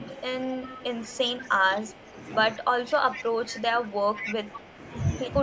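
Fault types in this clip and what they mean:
Speech suppressed in double talk: the voice dips by roughly 10 dB in pieces, about two seconds in total, likely the echo canceller turning down both talkers at once.
Echo leak: a delayed copy trails the voice by 195 ms in four scraps, about 10 to 25 dB down, likely loudspeaker echo escaping cancellation.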